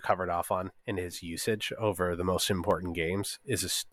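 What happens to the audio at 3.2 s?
At 3.2 s the audio sits inside a run of periodic USB or driver dropouts, spanning 1.70 to 3.71 s, just after "on in his usage". About once a second, a stalled driver or bus leaves roughly a millisecond filled with silence, heard as a few regular ticks during the speech.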